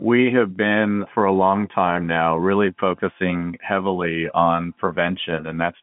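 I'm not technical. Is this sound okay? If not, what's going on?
Yes, no faults heard.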